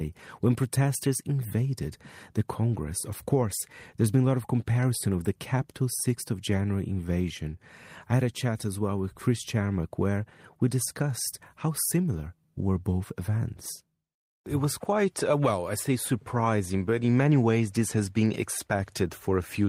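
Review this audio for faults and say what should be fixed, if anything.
Nothing to fix: no faults are audible anywhere in the speech recording.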